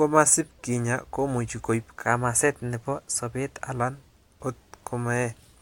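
It's a short speech clip, and right after "kinya komuch koib", at 2.06 s, everything lurches faster and higher: speed jumps about 6.3% and pitch rises 105 cents, roughly a semitone, until it snaps back at 3.77 s. That's a drift correction step, likely from clock-matching software bumping the playback rate in one go to drain or refill its buffer. Because speed and pitch move together, the talker sounds briefly sharp and hurried.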